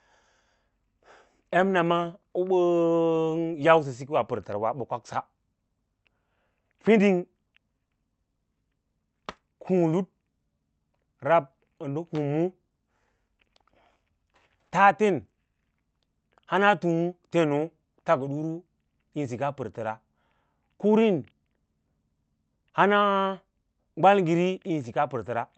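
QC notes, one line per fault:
Nothing to flag on this speech clip; it came through a WebRTC call path with Opus at 40 kbps, and the top end rolling off around 8 kHz is just how that call path is set up.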